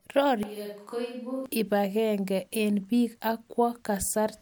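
A switch to a distant microphone runs from 0.43 to 1.46 s, ending just before "ipangenge eng pik ak". The speech abruptly turns roomy and hollow, thinner in the bass and roughly 10 dB quieter, with background noise rising to around 35 dB below the speech. The likely cause is that the close microphone's signal dropped out and a mic farther away took over, capturing more room reflection than direct sound until the close mic snapped back in.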